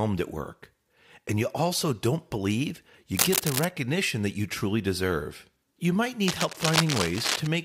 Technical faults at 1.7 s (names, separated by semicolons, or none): none